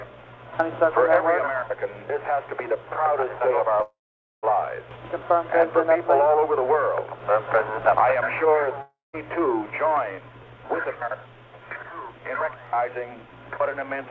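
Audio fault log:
1.03–12.67 s, clock drift buffer slips: a click recurs about every 2.8 s. This is likely two devices on separate clocks differing by around 70 ppm, so the buffer between them drifts until a handful of samples is dropped or repeated, breaking the waveform each time.
3.82–4.45 s, call audio freeze: the sound smears into a fading buzz, then about 0.48 s of near silence, with 0.61 s of stretched-out time in all. Delayed packets likely drained the jitter buffer. The audio resumes where it stopped, with nothing missing, but now 0.61 s later.
8.82–9.15 s, long network dropout: another fading buzz, trailing into about 0.17 s of silence over roughly 0.32 s. No audio arrived, likely from a network outage. When sound returns, about 0.32 s of material has been skipped.
10.21–11.05 s, jitter buffer speed-up: the sound runs about 8% fast at unchanged pitch and feels hurried. The receiver trimmed short pitch-period chunks, roughly 70 ms altogether, to shrink an overfilled jitter buffer.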